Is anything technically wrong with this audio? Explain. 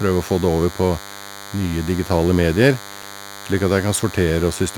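Yes, two faults are audible.

A DECT cordless phone buzz runs through the whole speech clip. A nearby handset or base pulses radio bursts 100 times a second, and the audio circuit rectifies them. The result is a thin, harmonic-rich 100 Hz buzz, sitting well below the speech.

CD scratch ticks appear from 2.74 s to 4.14 s. Six short ticks occur, the longest lasting only a couple of milliseconds. Damage on the disc defeats the error correction once per revolution. The player then patches over the lost samples, leaving brief clicks.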